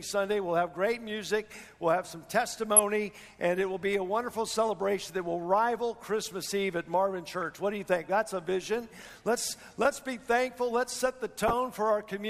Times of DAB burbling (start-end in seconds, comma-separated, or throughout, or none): 2.76-2.79, 7.40-7.43, 11.38-11.53